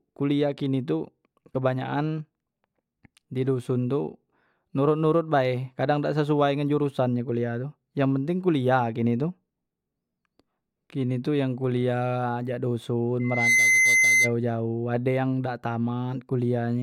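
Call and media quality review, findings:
Loudspeaker feedback squeal, 13.20–14.33 s: steady 2.1 kHz tone swelling over roughly a third of a second to a few dB above the speech. Mic picking up its own loudspeaker; loop gain exceeds unity at 2.1 kHz.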